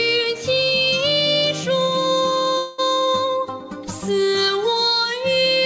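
From 2.58 to 2.80 s the sound gives way to a synthetic buzzy hiss that carries the last moment forward and fades. About 200 ms of audio is missing, likely a long network dropout. The receiver papered over the whole gap rather than leaving silence. What separates this from a brief packet-loss click is its length and the decaying, smeared tail. When the sound resumes, the lost stretch is simply gone, with the band still ending near 8 kHz as before.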